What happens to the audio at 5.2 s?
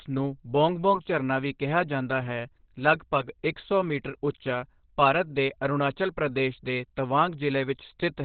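At 5.2 s the speech sounds muffled and hoarse, with nothing above about 4.4 kHz, as it does throughout the clip. This is likely heavy Opus compression in its narrowband SILK speech mode, which fits a very low bitrate around 12 kbps.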